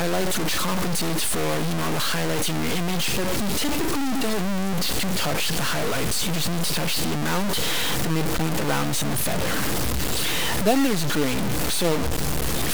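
From start to finish the audio is coarsely stepped and grainy, the sound of low bit depth without dither. The likely cause is truncation to about 3 bits, leaving error roughly as loud as the signal itself. On a waveform this shows as visible staircase levels, and a spectrogram shows broadband hash that tracks the signal's envelope.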